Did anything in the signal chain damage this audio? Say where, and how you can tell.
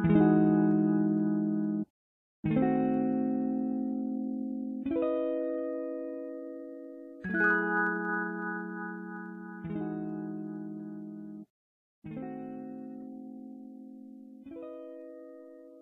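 Yes. Clock slip clicks run from 0.16 to 15.76 s, faint ticks about every tenth of a second. This likely comes from unsynchronised converter clocks around 200 ppm apart, each tick a one-sample slip. A spectrogram shows evenly spaced thin vertical lines.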